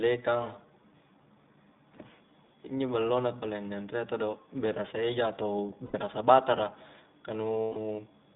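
The whole clip runs through the iLBC codec, so the speech sits in a narrow telephone band of roughly 150 Hz to 3.7 kHz, with nothing on top. Each 20 ms frame's excitation is coded on its own, and at this rate, which fits the 15.2 kbps mode, the damage is plainly audible: the voice comes across clear enough but a bit rough and synthetic, with a slightly grainy, vocoder-like edge.

Then there are two spots of lost iLBC frames. Right after "berasa eja atau", from 5.86 to 5.96 s, about 80 ms goes missing, which points to four frames. The decoder fills the hole by repeating the last pitch cycle with some noise mixed in, so you hear a short held, buzzy vowel. A longer one hits from 7.63 to 7.76 s, around 140 ms, and that concealed stretch fades as it goes. Both times the voice snaps back almost immediately, since the frames don't depend on each other.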